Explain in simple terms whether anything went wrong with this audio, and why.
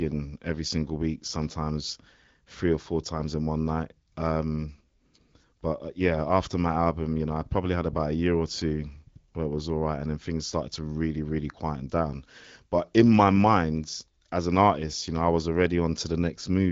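Nothing went wrong with this audio.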